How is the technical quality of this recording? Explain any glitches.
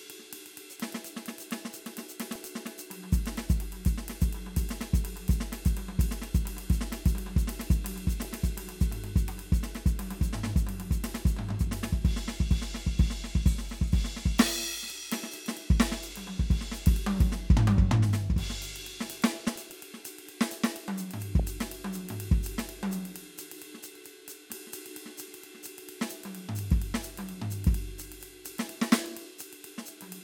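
The music recording is marred by DAB burbling in four places: 2.35 to 2.48 s, 8.23 to 8.33 s, a longer stretch from 19.15 to 19.82 s, and a brief blip at 21.4 s. Weak reception let a bit error rate of around 0.1 to 0.15 percent slip past error correction into the MP2 stream. Corrupted samples put short blips of noise into single sub-bands, and corrupted scale factors make sub-bands leap in level for up to a frame, producing a burbling sound over the music.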